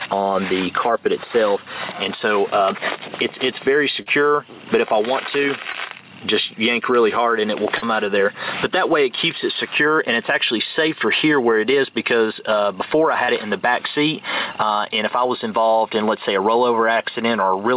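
Gain pumping runs through the whole recording: the level drops by around 10 dB as soon as a loud sound arrives, so the level breathes in step with the material. The likely cause is microphone gain set far too high, with a fast limiter or compressor clamping each peak. Loud and quiet passages end up close in level, and the sound is squashed.

Short concealed packet loss follows, at 4.02–4.08 s, 5.72–5.76 s, 7.78–7.84 s, 13.24–13.30 s and 14.52–14.56 s. The holes are about 40 ms at the first, third and fourth points and about 20 ms at the second and fifth. In each, the receiver stretched the preceding sound across the missing chunk and then blended back into the real signal. Each one is heard as a brief smear or small wobble, and a short transient there can drop out. All of this sits over a narrowband call path with nothing above 4 kHz.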